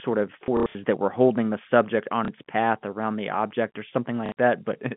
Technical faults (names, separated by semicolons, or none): packet loss with last packet repeated